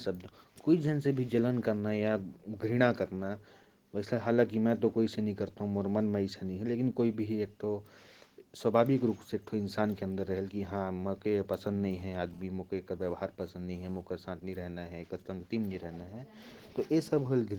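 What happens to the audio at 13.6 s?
At 13.6 s you're in the middle of a GSM phone buzz that runs from about 11.92 s to 14.01 s. A 2G handset nearby is sending in radio bursts about 217 times a second, and something in the audio path rectifies those pulses into sound. You get a hard, raspy buzz at about 217 Hz with lots of harmonics, sitting about 32 dB below the speech. Since the phone is moving data rather than holding a call, the buzz comes and goes instead of droning steadily.

Underneath that, the whole clip carries Opus voice compression, and it's plainly audible at this point too. The codec is running in hybrid mode: a linear-prediction coder handles the lower band and a transform layer covers everything above 8 kHz, so the band still reaches up to around 20 kHz. The excitation is coded coarsely, which fits a rate of about 16 kbps. That coarse coding leaves the speech sounding a bit hoarse, with a slightly robotic edge.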